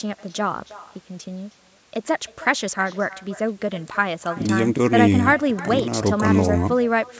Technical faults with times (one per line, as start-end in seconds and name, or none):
0.00-7.20 echo with no canceller